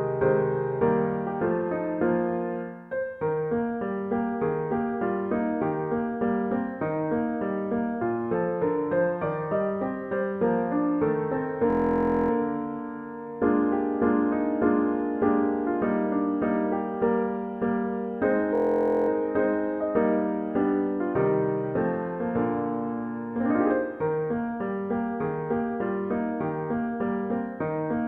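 A steady 43 Hz buzz replaces the sound from 11.70 to 12.31 s and again from 18.55 to 19.09 s. This is a system hang loop, where a 23 ms fragment repeats while the system stalls, which fits a 1024-sample buffer.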